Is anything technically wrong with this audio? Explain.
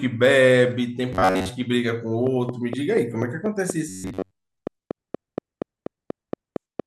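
Yes. The speech has two kinds of fault: robotic sound from repeated short buffers in two stretches, and a train of clicks through most of the second half.

From 1.13 to 1.49 s, and again from 3.89 to 4.51 s, the speech turns into a rigid, metallic buzz at 93.8 Hz that loosely follows the words. The likely cause is audio arriving too seldom, with the gap filled by replaying a fragment of about 10.7 ms while most of the real audio is skipped. On a spectrogram this appears as evenly spaced horizontal harmonics locked to 93.8 Hz. The waveform shows the same short cycle copied over and over.

From 2.27 to 6.81 s, a steady ticking of about 20 clicks at 4.2 per second sits over the speech and carries on through the pauses. The clicks peak well above the speech level. Each one has much the same shape, and they are evenly spaced. They likely come from electrical interference or a faulty connection or power supply. 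The waveform shows them as sharp, similar spikes at regular intervals. The spectrogram shows thin vertical lines running across the whole frequency range.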